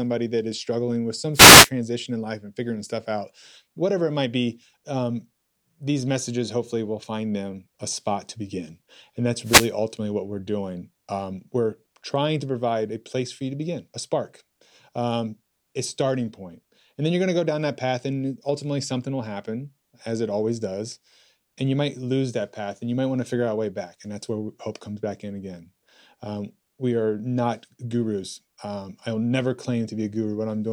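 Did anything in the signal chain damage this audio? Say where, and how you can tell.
Yes. Two short bursts of swishing static break through, from 1.33 to 1.70 s, between "is struggling with some" and "in life and figuring", and from 9.42 to 9.72 s, just before "ultimately what we're doing". These are wireless microphone noise hits in the analogue radio link ahead of the converter. Reflected copies of the FM signal cancel at the receiver, so its noise floor surges for about a third of a second.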